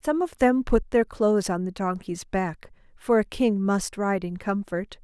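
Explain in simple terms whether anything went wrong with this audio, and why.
Nothing went wrong with this recording, and no fault can be heard anywhere in it.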